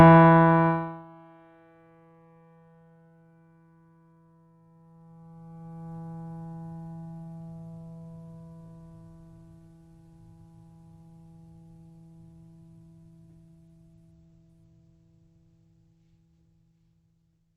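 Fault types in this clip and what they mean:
Nothing stood out on listening to this music clip.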